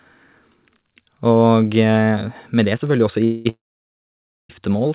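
A late packet delivery that likely drained the jitter buffer produces a call audio freeze from 3.24 to 3.47 s: about 210 ms of the last sound stretched into a fading buzz before the speech resumes intact. Another begins at 3.49 s and runs to 4.51 s. After a brief tail, about 920 ms of silence follows, then the speech continues where it stopped with nothing lost. The narrowband call path carries nothing above 4 kHz.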